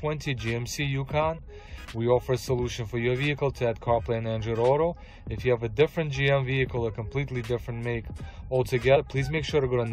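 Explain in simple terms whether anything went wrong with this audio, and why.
Compressed frames skipped, at 8.95 to 8.97 s: a few chunks of the compressed file were missing or rejected as damaged, so playback jumps ahead by around 70 ms, roughly three frames of about 23 ms each, leaving a brief glitch where the audio rejoins.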